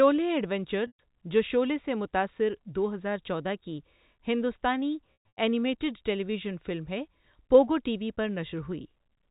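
Packet loss with pitch repetition occurs twice in this telephone-band speech. From 0.87 to 0.99 s, about 120 ms of audio never arrived, and the receiver loops the last pitch period to fill the hole, so the sound hangs as a buzzy held tone that fades before "جو شعلے سے متاثر" resumes. From 5.13 to 5.37 s, just after "ہزار چودہ کی ہندوستانی", 210 ms went missing in scattered gaps over 240 ms, the longest 120 ms, giving a stuttering run of repeated, fading buzz.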